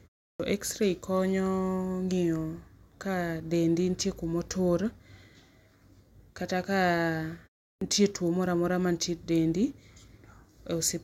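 Clipped start after a pause occurs at 0.34 s and again at 7.75 s. Each time, the output device has dropped into a low-power state during roughly a third of a second of silence and needs time to wake. The first 56 ms and then 64 ms of speech are swallowed, so the sound after the pause begins abruptly, missing its onset, the second time just before "tuo moro amora".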